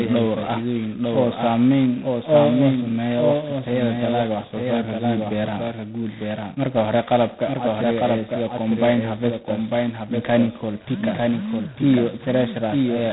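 A doubled audio track runs throughout. A second full-band copy trails by about a second, somewhat quieter, likely from an out-of-step capture path.

G.726 ADPCM damage is also present from start to finish. Nothing passes above 3.9 kHz. A harsh, rasping hiss tracks the speech level, which fits 16 kbit/s coding.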